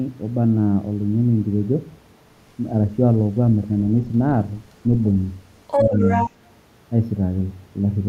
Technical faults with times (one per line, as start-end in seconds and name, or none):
5.67-6.31 other side's voice leaking through
5.84-6.03 speech suppressed in double talk
6.30-6.35 speech suppressed in double talk